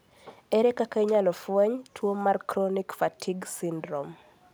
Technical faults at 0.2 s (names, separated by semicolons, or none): none